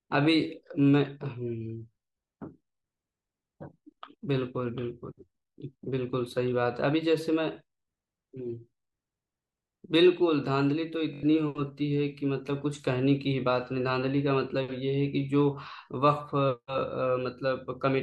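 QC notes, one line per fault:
11.14–11.23 s Bluetooth stutter: 85 ms of packets lost, so the receiver looped its last buffer into a brief machine-gun buzz before the speech jumped ahead.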